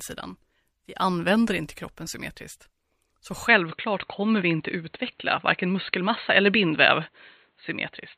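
Speech that turns dull and narrow at 3.48 s. From there to the end, nothing passes above 4.3 kHz. The change has no gap and no level jump. Faint new background noise appears far below the speech. The likely cause is an input switched to a poorer device.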